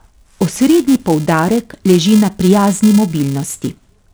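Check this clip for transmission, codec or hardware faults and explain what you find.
One fault runs through the whole recording: a filter restarted on every block. A filter that discards its state at each block boundary starts every block from silence, so each boundary adds a small transient. Here that gives a steady 375 Hz buzz, which fits a 128-sample block, and it rises and falls with the speech level. Ordinary mains hum would stay at a fixed level through pauses.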